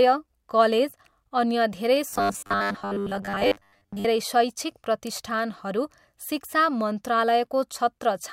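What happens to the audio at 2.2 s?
Right after "कलेज अन्य धेरै", from 2.10 to 4.05 s, the speech takes on robotic sound from repeated short buffers: a rigid, metallic 100 Hz buzz, likely from a roughly 10 ms buffer replayed in place of most of the audio.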